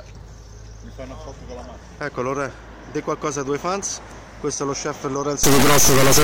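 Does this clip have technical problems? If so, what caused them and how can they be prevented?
Yes. From 5.44 s to 6.23 s there is an integer read as float fault: 32-bit integer samples are interpreted as 32-bit float, producing an extremely loud, buzzing square wave. The waveform slams between zero and the clipping limit, and the spectrogram shows dense harmonic bands up the full range. Prevent it by declaring the sample format explicitly and checking that writer and reader agree on it.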